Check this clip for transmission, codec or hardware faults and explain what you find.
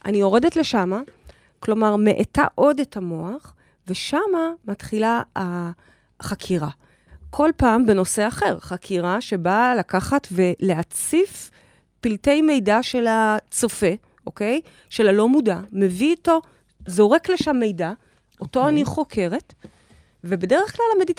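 I found no transmission, codec or hardware faults in this clip.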